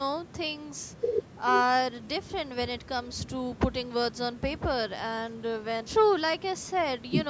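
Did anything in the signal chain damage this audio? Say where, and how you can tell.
No, no stage in the signal chain has damaged this speech recording. It has passed through a call's microphone processing, which leaves nothing above 8 kHz and trims the lowest bass with its high-pass filter, as that stage normally does.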